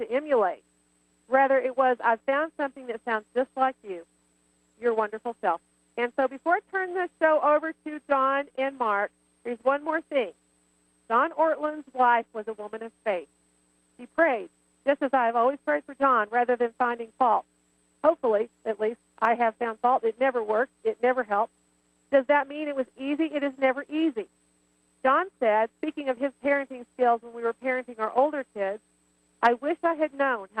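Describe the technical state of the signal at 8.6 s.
A brief smear and wobble runs from 8.56 to 8.68 s. This is short concealed packet loss. About 20 ms of the stream arrived too late, and the receiver extended the preceding sound to cover it, then crossfaded back. That stretched the passage by roughly 30 ms.

Inside that span, from 8.57 to 8.59 s, a 20 ms stretch turns rougher and grainier. This is a lost packet rebuilt from error correction. Opus recovered the frame from the lower-bitrate redundant copy carried in the following packet and played it in place of the original.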